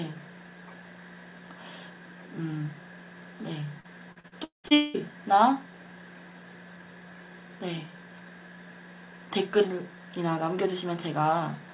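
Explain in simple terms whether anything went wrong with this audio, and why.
Repeated packet loss, with its robotic sound, hits from 3.8 to 4.97 seconds. Over that stretch, chunks of the audio were lost on their way through the call, seven times in quick succession, the longest gap lasting about 0.2 seconds. Each time, the receiving end filled the hole by stretching out the last bit of sound it had, so about half of that stretch is patched-in guesswork. That is why it sounds choppy and mechanical. The rest of the call sounds muffled because that kind of call carries nothing above 4 kHz.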